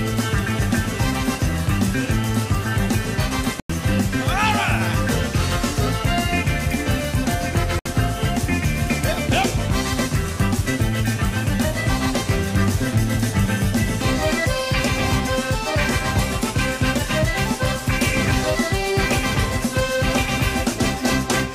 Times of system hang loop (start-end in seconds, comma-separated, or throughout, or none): none